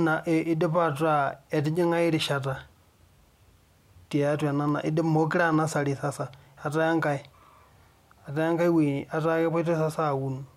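Two sharp clicks break the speech, at 4.69 s and 5.54 s. Each is a single brief tick, seen as a thin vertical line across the spectrum. The likely cause is dropped samples. A tiny fraction of a millisecond goes missing, so the waveform jumps abruptly.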